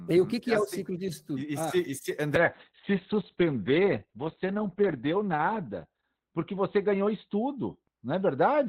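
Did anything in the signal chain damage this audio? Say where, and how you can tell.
Yes. A call bitrate drop hit the codec stage. From 2.39 s to the end, the encoder fell from 32 to 7 kbps, holding that floor for 2.69 s, and bandwidth narrowed from 20 kHz to 4 kHz. The speech turns coarse, watery and muffled.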